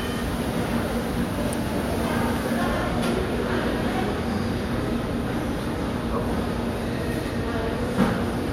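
No technical faults can be heard anywhere in the sound.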